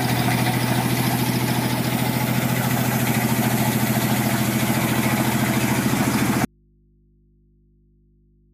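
From 6.45 s to the end, the sound drops out abruptly to a faint residue: only mains hum remains, roughly 35 dB below the signal. The likely cause is a lost source with the input still live. The waveform collapses to a thin band, and the spectrogram shows only low hum lines.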